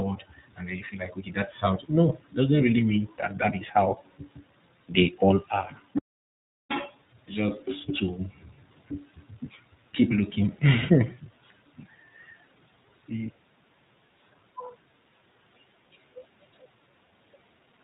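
The speech in this clip has been through the iLBC codec, a narrowband VoIP coder whose character fits its 15.2 kbps, 20 ms frame mode. Nothing above 4 kHz survives, leaving the voice plainly rough and synthetic throughout. A lost iLBC frame, apparently a single 20 ms packet, falls between "okay that's how no" and "really mean that that" at 2.58 to 2.61 s. The decoder bridges it by repeating the last pitch cycle mixed with noise, giving a brief held, buzzy vowel before the voice recovers at once.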